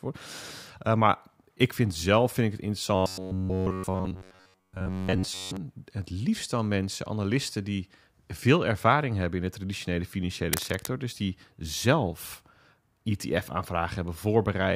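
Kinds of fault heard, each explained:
robotic sound from repeated short buffers: rigid metallic 93.8 Hz buzz from 2.95 to 5.57 s, likely from an 11 ms chunk replayed over most of that stretch.
cable scratch noise: dense, uneven scratching a little below speech level from 10.53 to 10.87 s, likely from a moved connector whose contact resistance jumps.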